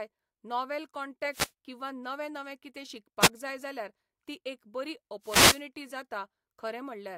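Three wireless microphone noise hits show up in this speech: 1.31 to 1.52 s, 3.22 to 3.28 s just before "जाय जाल्यार ती एक", and 5.22 to 5.64 s after "जाल्यार ती एक बरी". Each time, reflections cancel the FM radio signal and receiver noise swells into a brief swish of static.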